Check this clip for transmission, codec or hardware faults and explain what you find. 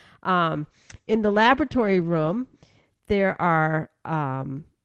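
There is one fault: a call bitrate drop from 0.55 s to the end. The encoder's budget fell sharply, consistent with a change from about 64 to 11 kbps, so Opus coded coarsely and narrowed bandwidth from 20 kHz to 8 kHz for 1.77 s at lowest. Speech turns muffled and watery. A spectrogram shows energy above 8 kHz gone.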